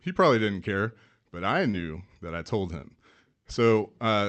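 At 1.71 to 1.75 s, between "didn't care but I" and "that I told him", short concealed packet loss: about 20 ms went missing and the receiver extrapolated the preceding speech to fill it, giving a brief smear. On a spectrogram, the preceding sound carries on smoothly across the gap, under the 8 kHz ceiling of the call path.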